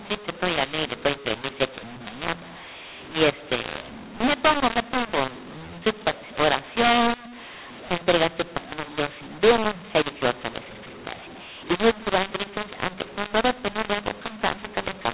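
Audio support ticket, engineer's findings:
Speech harsh and gritty for the full clip, throughout. Level scrambled: some peaks over-loud, others squashed; pauses filled with hiss instead of silence. Bandwidth capped at 4 kHz, which fits 8,000 Hz G.711 telephone coding. Cause: mu-law and A-law mixed up. Audio encoded as A-law, decoded as mu-law. Mismatched logarithmic curves mis-scale every 8-bit code and lift the quietest codes well above zero. Fix: align decoder law with encoder (A-law).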